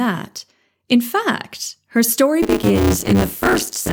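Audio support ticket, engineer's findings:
Buffer tearing from 2.42 s, just after "fact her story", to the end. Robotic 100 Hz buzz on speech; about half of each 10 ms period is audio roughly 30 ms old. Output ring buffer: writer and reader crossing each period.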